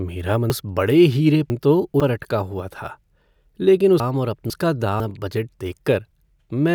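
Between 0.5 and 2.0 s, just before "पर अटका हुआ", the speech has chunks out of order: a 500 ms chunk plays two chunks late. Between 4.0 and 5.0 s, another 500 ms chunk plays one chunk late. Each jumbled stretch has three hard joins. Unlike a dropout, no audio goes missing; it is only reordered.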